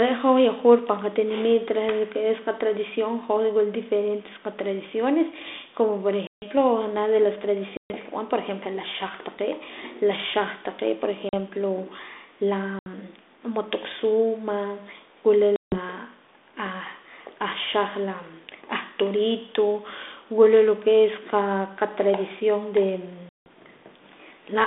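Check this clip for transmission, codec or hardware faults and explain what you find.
The clip is speech over a G.726 ADPCM link, audible as a narrow 250 Hz to 3.6 kHz band at 32 kbit/s, and it carries packet loss on an ADPCM call. Holes open at 6.27, 7.77, 11.29, 12.79, 15.56 and 23.29 s, the last just after "es qa qatradición de". They run from 40 to 170 ms. Each lost stretch becomes hard-edged silence. Because the decoder's predictor and step size drift from the sender's during the gap, speech resumes with slight distortion that settles within tens of milliseconds. A plain PCM dropout would resume clean.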